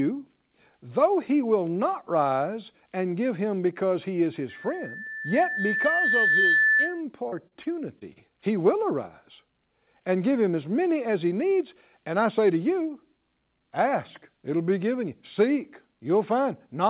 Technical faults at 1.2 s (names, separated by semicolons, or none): none